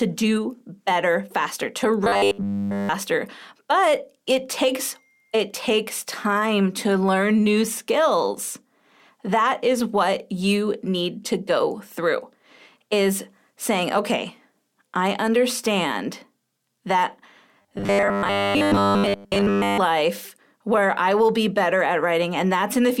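Speech, with robotic sound from repeated short buffers in two places. From 2.04 to 2.89 s, right after "do better faster to", the voice becomes a rigid metallic buzz at 100 Hz. Almost all of that stretch sounds repeated. From 17.62 to 19.79 s the same 100 Hz buzz returns, over most of the span. The likely cause is audio arriving too seldom, with the last 10 ms buffer replayed to fill the gaps.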